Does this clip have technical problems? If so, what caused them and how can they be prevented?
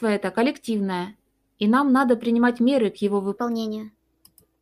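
Yes. From 3.37 s to the end, after "принимать меры к его", a section at the wrong speed runs 1.2 times fast, likely from a clock mismatch. It sounds hurried and about three semitones higher. Pitch-shifting alone wouldn't change timing. Keeping playback and editing sample clocks matched prevents this.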